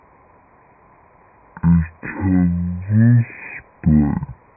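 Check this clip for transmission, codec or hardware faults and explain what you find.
The whole clip suffers from a wrong sample rate. Speech that was captured at 48 kHz is being played back at 16 kHz with no conversion, so everything runs at a third of its proper speed and drops about 19 semitones, just over an octave and a half. Because pitch and tempo fall together by the same ratio, the voice comes out as a deep, slow, dragging drawl from start to finish.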